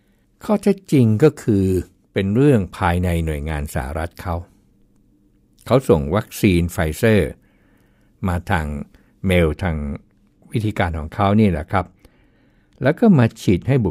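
A treble-cut de-emphasis applied wrongly from 9.33 s to the end rolls off highs, about 8 dB down at 10 kHz, leaving the speech dull and muffled.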